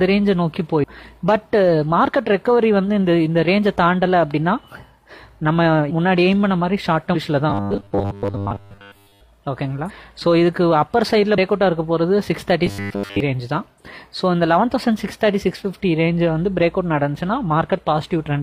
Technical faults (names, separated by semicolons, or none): compressed frames skipped; robotic sound from repeated short buffers